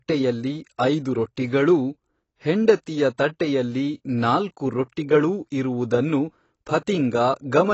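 AAC compression affects the whole speech clip. Nothing sounds above 8 kHz, leaving it dull and smeared. Sibilants turn fizzy. A low-bitrate AAC-LC encode is the likely cause.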